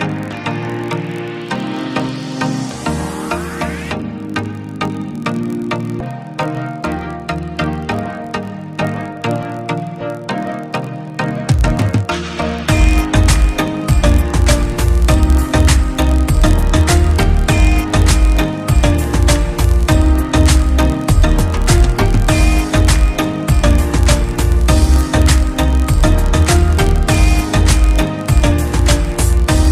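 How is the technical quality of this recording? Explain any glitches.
The recording has one fault that runs from start to finish: a filter restarted on every block. Across the whole clip there is a steady buzz at about 43.1 Hz, which fits a 1024-sample block. A filter in the chain is dropping its memory at each block boundary and starting again from silence, so every block opens with a small transient. Those repeated transients fuse into the buzz, which rises and falls with the level of the sound. That tracking is what separates it from mains hum, which holds steady regardless of level and sits at 50 or 60 Hz.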